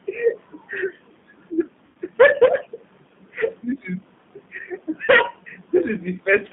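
G.729 codec, throughout the clip: the speech is squeezed into a telephone band of roughly 150 Hz to 3.6 kHz, so there's no sibilant air or low body. The codec rebuilds each 10 ms frame from a vocal tract filter, a pitch predictor and a handful of pulses. The damage is plainly audible as a rough, slightly synthetic grain on the speech, which fits an 8 kbit/s G.729A stream.

VoIP packet loss concealed by the speech codec, from 1.86 to 1.96 s: about 90 ms of audio never arrived, which fits nine lost 10 ms frames. The decoder filled the gap by extending its last pitch and filter settings while turning the gain down frame by frame, so the sound smears into a buzzy tone or coloured noise that fades. Because each frame is built on the previous one, the speech stays weak or distorted for a short while after the packets resume.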